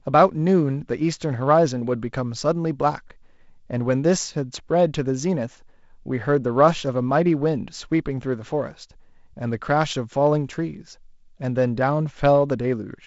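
No technical faults occur in this speech, which carries G.722 wideband telephone coding with its top end stopping near 7.7 kHz.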